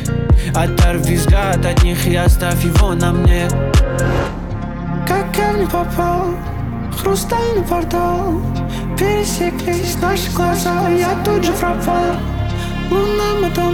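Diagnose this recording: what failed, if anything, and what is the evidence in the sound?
From 9.73 s to 11.61 s a doubled audio track appears: a second, full-band copy of the sound trails the original by roughly 0.4 s, about 5 dB quieter, and it switches on and off abruptly at those edges. Unlike acoustic echo or reverb, the copy has no decay tail or room colouring and does not repeat. The likely cause is the sound being captured a second time through a slower driver or buffer path, or an edit overlapping two copies out of step.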